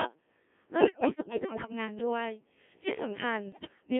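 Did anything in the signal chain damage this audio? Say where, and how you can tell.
Yes. The codec stage damaged it for the whole clip. This is speech through a Codec 2 vocoder. The sound is robotic and buzzy, and the band runs from 250 Hz to 3.4 kHz. The damage is heavy, which fits the 1.3 kbit/s mode. The decoder does not keep the waveform. It rebuilds the voice from sine waves, using only pitch, voicing, energy and a spectral envelope. That resynthesis gives the buzz.

The radio link added bit errors on digital voice radio in two bursts. The first runs from 0.80 to 1.72 s. Pitch, level and tone colour lurch there, and the sound breaks into warbles and garbled bleeps. The second runs from 3.52 to 3.80 s and is milder. The first burst suggests about one bit in five flipped, and the second fewer than one in ten. At this rate each bit shapes a whole frame, so one flip corrupts a frame's pitch, level, voicing or spectrum.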